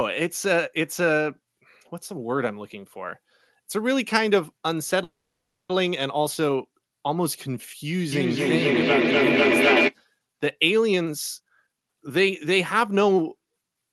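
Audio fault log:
5.03 to 5.71 s, call audio freeze: the sound stalls, its last moment drawn out as a brief fading buzz and then about 0.53 s of near silence, before resuming exactly where it stopped. This is likely packets held up in transit, leaving the jitter buffer empty. About 0.66 s is inserted and nothing is lost, so everything after runs later. On a spectrogram, a smeared, decaying band gives way to a blank column. The waveform shows a flat stretch.
8.12 to 9.96 s, feedback echo between two devices: each sound comes back roughly every 0.3 s, and the copies sound thinner and more ringing each pass. A second device in the room is replaying the call into a microphone, whose echo canceller cannot remove audio it did not play itself. The loudest repeats reach about 3 dB above the direct sound, so they build rather than fade. A spectrogram shows stacked, evenly spaced copies, and the waveform envelope swells.
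10.92 to 13.82 s, jitter buffer speed-up: the audio plays at about 123% speed with unchanged pitch, sounding rushed. The buffer held too much, and the receiver cut many short pitch-period slices to shrink the delay, removing roughly 0.7 s in total. On a waveform, syllables look compressed in time. The spectrogram's harmonics stay at the same height, and the top stays near the 12 kHz ceiling, which fits Opus at around 24 kbps.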